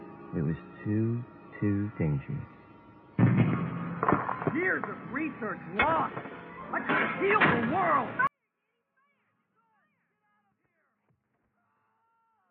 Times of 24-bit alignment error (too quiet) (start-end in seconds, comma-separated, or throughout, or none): 8.27-12.50